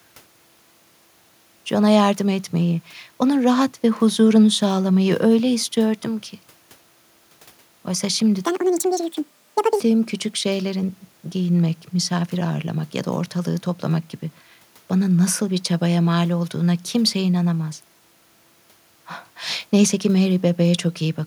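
From 8.45 to 9.80 s a section at the wrong speed plays 1.8 times fast, nearly an octave high and hurried, likely from a wrong playback clock; the spectrogram shows harmonics jumping upward. Faint room noise sits about 39 dB below the speech.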